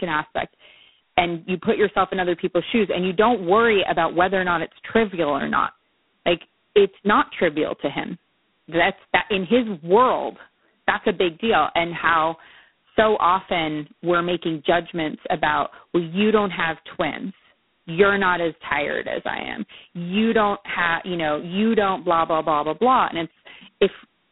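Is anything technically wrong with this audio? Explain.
Yes. G.726 ADPCM coding runs throughout. Coarse two-bit prediction-error steps, consistent with 16 kbit/s, add a harsh hiss tracking the speech level, with nothing above 3.9 kHz.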